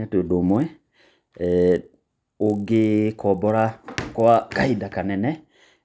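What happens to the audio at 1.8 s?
At 1.8 s a low, steady buzz rides on the speech, a train of faint ticks repeating 50 times a second that sounds only while there is signal. It runs from 0.46 s to 4.48 s and comes from a resampler restarted on every block. Each 20 ms block was converted separately, consistent with a change from 24 kHz to 16 kHz, so at every block edge the converter lacked the real neighbouring samples and left a small error there.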